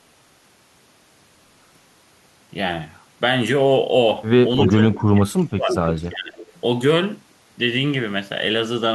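At 4.65 to 4.72 s, an echo leak sends back a copy of the speech 0.32 s late, only slightly quieter than the original. Loudspeaker sound likely slipped past an echo canceller. From 4.69 to 5.76 s, speech suppressed in double talk makes the voice dip deeply and break up for most of that stretch. The canceller likely took both talkers for echo. The echo leak returns at 5.72 to 5.93 s, again 0.32 s behind, with the same likely cause. Suppression dips the voice strongly from 6.11 to 6.42 s, likely for the same reason. A last, faint echo follows at 6.42 to 6.61 s, likely leaking through the same way.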